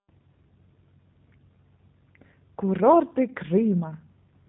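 Throughout, the speech carries plainly audible G.729 codec damage: nothing above 4 kHz, and a rough, synthetic texture from sparse pulse excitation, fitting 8 kbit/s coding.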